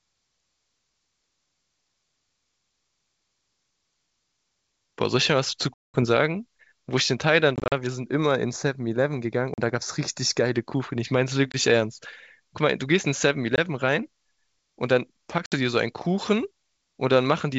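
Packet loss on an ADPCM call first appears at 5.74 to 6.04 s, where about 200 ms vanishes into a hard-edged silence, roughly ten packets' worth. Further gaps follow at 7.56 to 7.73 s (100 ms lost, scattered in runs no longer than 40 ms), 9.54 to 9.59 s (40 ms), 11.52 to 11.57 s (20 ms), 13.56 to 13.59 s (20 ms) and 15.46 to 15.55 s (60 ms). A plain dropout would resume cleanly. Here the decoder's predictor and step size have drifted from the sender's, so each return brings a click, a wrong level or brief distortion that settles within some tens of milliseconds.

Channel delay with comb filtering runs from 8.04 to 10.55 s and overlaps the 9.54 s gap. One channel lags the other by a fraction of a millisecond, and summing them to mono cancels shared content at evenly spaced frequencies. The first notch falls around 3 kHz, giving a hollow, phasey colour. A low-pass filter or a narrowband codec would remove the top smoothly. 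These notches are fixed and regularly spaced, and the wideband G.722 coding keeps the highs around them.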